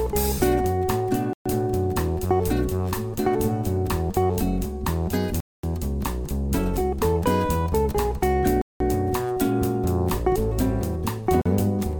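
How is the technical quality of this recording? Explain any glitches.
The recording has four dropouts. At 1.33 to 1.46 s, 5.40 to 5.63 s, 8.62 to 8.81 s and 11.42 to 11.46 s, the sound cuts to silence for about 123, 231, 188 and 41 ms. Each is likely a Bluetooth stall. Interference delays packets, the headphone buffer empties, and playback halts until resent data arrives. The sound then resumes abruptly, with no fade on either side.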